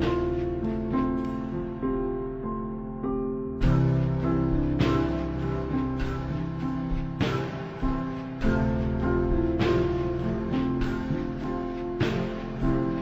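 From start to finish the clip shows stereo read as mono. The left and right samples of each stereo frame have been taken one after another as if they were consecutive samples of a single channel, so every frame occupies two sample periods. Played back, the sound runs at half speed and sits a full octave, 12 semitones, below where it should. A fainter mirrored copy of the sound also shows up in the upper half of the spectrum.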